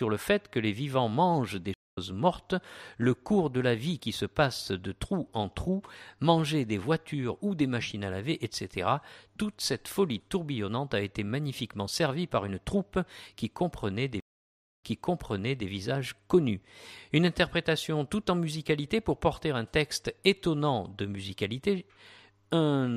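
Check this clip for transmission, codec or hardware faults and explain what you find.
There are two stream reconnects. At 1.74 to 1.98 s the connection drops, about 211 ms of silence follows, and a fresh decoder picks up roughly a fifth of a second later. At 14.20 to 15.67 s it goes silent for 610 ms, then a resent burst repeats about 0.86 s of audio.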